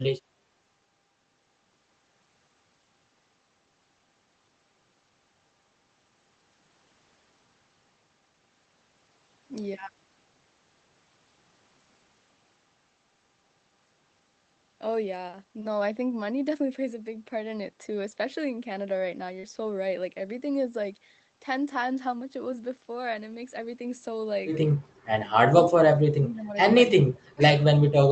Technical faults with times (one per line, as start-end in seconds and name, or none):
19.39-19.46 short concealed packet loss
25.49-25.66 speech suppressed in double talk
25.96-26.54 speech suppressed in double talk
26.90-27.42 speech suppressed in double talk